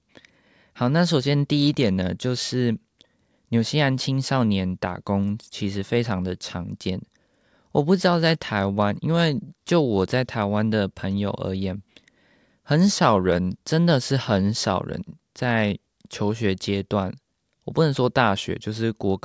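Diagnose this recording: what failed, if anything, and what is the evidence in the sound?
Nothing in this speech recording points to a failure at any stage of the chain. The recording gives no evidence that would trace a problem to wiring, conversion, processing, transmission, storage or playback.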